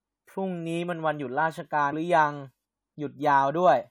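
A brief glitch cuts into the speech from 1.89 to 1.93 s: damaged data in the compressed stream, where corrupted frames made the decoder lose sync.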